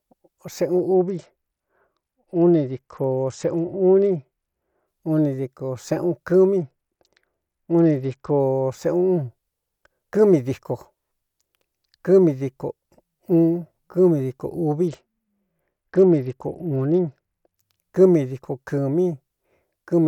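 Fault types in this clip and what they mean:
Bluetooth SBC bit pool drop: The speech loses its top end three times, from 0.94 to 4.88 s, 6.57 to 8.40 s and 14.87 to 17.58 s. Each time the treble goes dull and a gritty grain sits under the sound. Then clarity snaps back. The sound points to a congested link forcing the encoder from a bit pool near 31 down to about 9, around 72 kbps. Too few bits reach the high sub-bands, and the rest are coarsely quantised.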